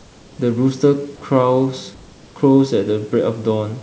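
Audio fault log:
0.00–0.38 s and 1.94–2.36 s, comfort noise in place of the background: during these pauses, lasting 379 ms and 420 ms, the room's real background gives way to a smooth, featureless hiss about 5 dB and about 3 dB quieter. The likely cause is discontinuous transmission, with the receiver synthesising noise to fill the gap. On a spectrogram the textured background turns to an even, grainy wash below 8 kHz; the waveform shows a slightly thinner, uniform band.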